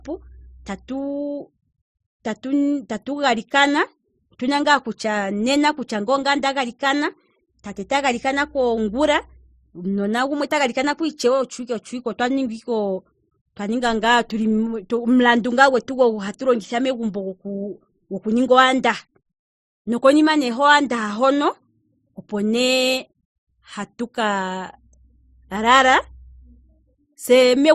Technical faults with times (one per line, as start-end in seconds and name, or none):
0.00-27.75 transcoding between lossy codecs